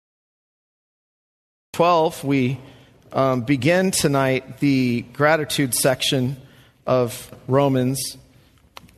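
The audio has a cut-off start: digital silence runs from 0 to 1.74 s, then sound begins abruptly at 1.74 s partway through an ongoing event, with no natural attack or fade-in. Capture or streaming evidently began late, clipping off the opening.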